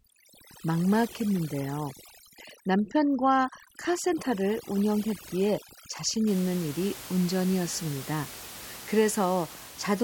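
Overdone noise removal runs from 0.0 to 6.27 s. The noise reduction was set so aggressively that individual frequency bands are pulled far down or shut off whenever their level sits near the estimated noise floor. The room noise, which lies about 16 dB below the speech, drops and breaks up into twinkling artefacts. The quieter parts of the speech are stripped away with it.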